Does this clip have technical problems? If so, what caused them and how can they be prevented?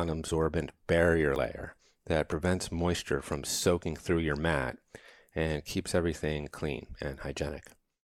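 Yes. At 1.36 s the speech skips ahead, losing about 40 ms, likely a dropped buffer (overrun) overwritten before being read. Larger capture buffers prevent this.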